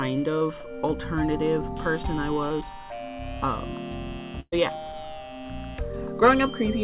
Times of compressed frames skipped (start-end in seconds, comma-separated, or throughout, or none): none